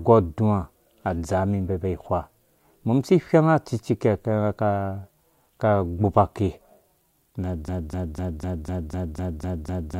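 At 7.68 s the speech turns into a broken-record loop: a fragment of about 250 ms repeats back to back, nine times, identically, through to the end of the clip. The stutter is rigid and mechanical, with each cycle a sample-exact copy. The likely cause is a stalled player, encoder or stream that kept re-emitting the last block it held, so the audio belonging to those final two-odd seconds never plays.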